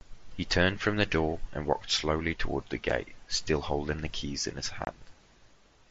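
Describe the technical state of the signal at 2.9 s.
At 2.90 s there is unconcealed Bluetooth headset packet loss: a hole of about 7.5 ms, which fits a single lost frame on the link to the phone. Nothing patches the gap, so it sounds like a brief hole with abrupt edges rather than a smoothed or repeated fill.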